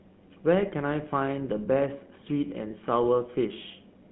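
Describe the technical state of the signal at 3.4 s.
At 3.4 s you're right in the middle of a short burst of GSM bit errors, running from 3.38 to 3.42 s. Corrupted bits have reached the decoder, so the filter, pitch or gain values for that stretch come out wrong. You hear a quick squawky, gargling pop where the spectrum bends and the level jumps. Forty milliseconds like that fits two damaged 20 ms frames, and an error rate somewhere around half a percent.

Underneath it, as everywhere in the clip, is the GSM full-rate codec. The sound has that buzzy, gravelly roughness you get when the vocal tract is modelled and driven by regularly spaced pulses, with only a fraction of the excitation kept, which is consistent with the 13 kbps full-rate coder. The line band runs from about 150 Hz to 3.5 kHz, so there's nothing up top, and the codec damage is plainly audible.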